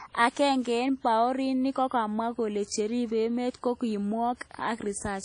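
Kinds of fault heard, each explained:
WMA compression: The speech runs through the whole clip with plainly audible codec damage, a ringing, washy smear and a hiss that swells and fades with each phrase. This is likely a low-bitrate transform codec whose long blocks spread quantisation noise over tens of milliseconds, which fits a 32 kbps setting. A spectrogram shows nothing above 10.1 kHz, with weak components dropped into patchy gaps, and the waveform shows pre-echo smearing ahead of sharp onsets.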